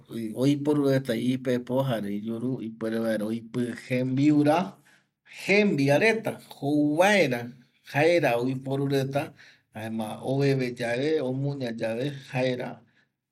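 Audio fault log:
2.45–5.73 s and 9.82–13.23 s, Bluetooth SBC bit pool drop: the treble dulls and gritty noise rises, easing just before "reta jouvaera jaera oiporu" and returning after "jouvaera jaera oiporu reta". This fits a bit pool falling from 28 to 11, near 90 kbps, which starves the top sub-bands. A spectrogram shows the upper bands emptied and grainy.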